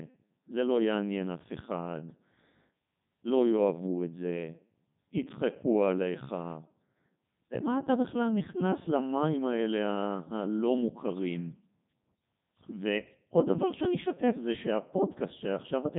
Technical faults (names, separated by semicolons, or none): Codec 2 vocoder